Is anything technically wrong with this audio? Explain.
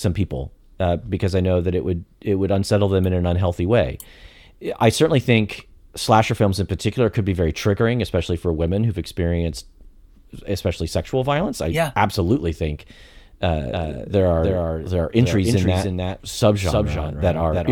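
Yes. From 13.71 s to the end, just after "yeah absolutely think uh", a doubled audio track appears: a dry, full-band copy about 5 dB quieter trails roughly 300 ms behind, starting abruptly, likely from a second, slower capture path.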